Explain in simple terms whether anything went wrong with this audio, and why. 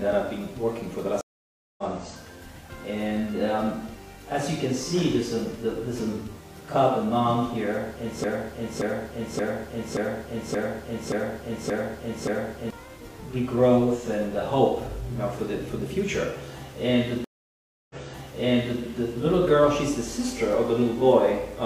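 Two stream reconnects: at 1.21 s the connection dropped, leaving 0.57 s of silence before resuming about a third of a second further on; at 17.24 s, 0.65 s of silence, then playback restarts 0.93 s earlier, replaying audio.

A broken-record loop from 8.24 to 12.70 s: a 0.58 s fragment repeats eight times back to back, likely a stalled stream resending its last piece, so the real audio there is lost.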